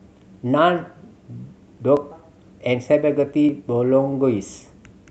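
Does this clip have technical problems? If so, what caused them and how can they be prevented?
Yes. The speech has two tiny skips at 1.97 s and 3.49 s, each losing only a few milliseconds with no silence left behind. This is likely audio missing between chunks, where a recorder or processor drops a sliver while closing one block and opening the next. Unlike a skip ahead, barely anything is lost. Recording with continuous, overlapping buffers or a gapless capture loop prevents this.

At 2.11 to 2.22 s there is a skip ahead. Playback jumps forward and roughly 0.4 s of speech vanishes, with the two sides butted together almost directly. The size of the jump is what separates it from the chunk gaps. Preventing it requires a jitter buffer that drains gradually instead of discarding a large stretch when it overflows.

From 2.70 to 3.33 s the jitter buffer speed-up makes the speech run about 9% fast at unchanged pitch, trimming roughly 70 ms through many removals of pitch-period-sized pieces. 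It sounds hurried rather than cut, which distinguishes it from a skip. A steadier network, or a buffer target that adapts more slowly, prevents this.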